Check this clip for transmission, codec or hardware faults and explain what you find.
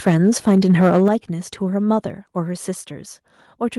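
Two hardware-side faults are audible, both in the first second or so of the speech.

Microphone overload, from 0.06 to 1.08 s: the loudest syllables carry a harsh, crackling edge, with peaks flattened against the ceiling. The likely cause is an input level set about 6 dB too hot, driving the analogue-to-digital converter past full scale so that the tops of the waveform are sheared off. Only around 5 percent of the audio is affected, but each flattened peak adds a burst of gritty distortion.

Microphone volume stepped down, at 1.08 s: right where the distortion ends, the speech and the background both drop abruptly by about 7 dB in a single step, with no fade. This is likely the call software detecting the clipping and cutting the device's input gain in one move. That also explains why the crackle stops at that point: the peaks now sit below full scale, at a noticeably quieter level.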